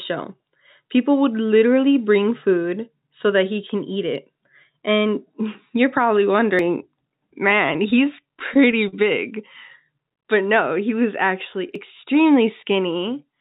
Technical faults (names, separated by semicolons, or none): dropped buffer (overrun); repeated stalls (stutter)